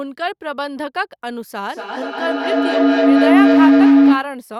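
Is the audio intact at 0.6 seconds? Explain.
Yes, the speech at 0.6 seconds plays through intact, with no dropout, click, distortion or other fault at that moment.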